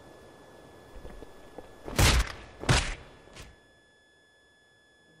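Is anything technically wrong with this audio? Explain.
Yes. A faint, high, steady whistle runs underneath the sound for its whole length, sitting well below the main signal at roughly 35 dB down and drifting slightly in pitch between about 1.70 and 1.73 kHz. This is switching supply whistle: a switching power supply in the recording or playback chain is cycling at an audible rate, in a light-load burst mode or beating against another supply, and its small load-dependent frequency changes produce that wavering tone.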